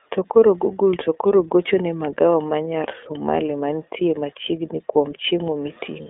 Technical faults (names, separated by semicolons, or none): iLBC codec